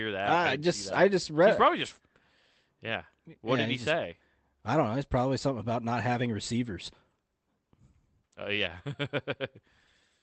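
Nothing faulty is audible in the speech; the call path shows only its ordinary coding texture and a top end that stops near 8 kHz, which fits a wideband Opus setting.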